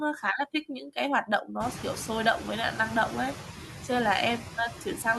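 Throughout the speech, noise suppressor artifacts are present: the suppressor lowers bands it judges to be steady noise, frame by frame, cutting the background by only about 6 dB. After the room noise rises near 1.5 s, the noise dips between phrases and swells back under speech. Unlike a noise gate, it never falls to silence.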